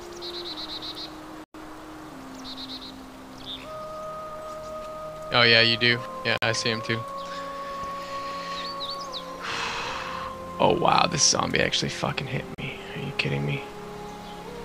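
At 1.44 s the sound cuts to silence for about 103 ms, then again at 6.38 s for 49 ms and at 12.55 s for 36 ms. These are most likely Bluetooth stalls: the headphones' buffer emptied while delayed packets were resent, so playback froze. Unlike a clipped-out dropout or codec glitch, each gap is clean, full silence with no burst of noise or smeared sound around it.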